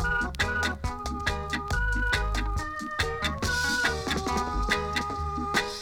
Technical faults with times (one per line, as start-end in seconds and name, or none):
none